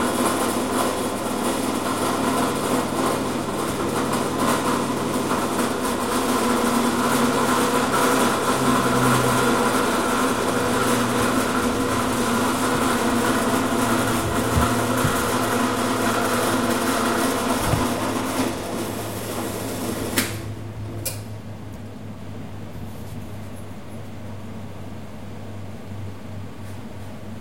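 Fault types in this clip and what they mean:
Doubled audio track: From 22.19 s to the end, the sound is joined by a second, full-band copy of itself that trails by roughly 0.4 s and sits about 5 dB below the original. The copy carries no decay or room colouring, so it reads as a separate track rather than an echo, and it cuts in abruptly. The likely cause is a slower second capture path mixed in, or an edit that left two copies out of step.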